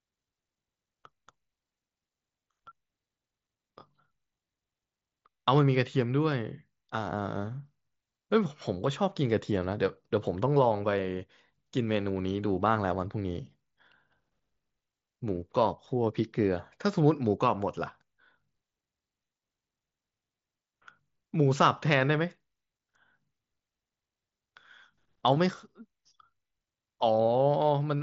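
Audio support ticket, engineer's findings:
No faults found in the speech recording. The Bluetooth mSBC headset path is audible as a band limit around 8 kHz, with faint graininess on louder passages and the weak top bands flickering in and out.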